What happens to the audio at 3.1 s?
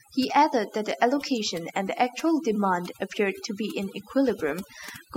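At 3.1 s, as throughout, overdone noise removal zeroes bands near its noise estimate, leaving the background broken into twinkling, warbling specks; the spectrogram shows a blank background flecked with isolated specks.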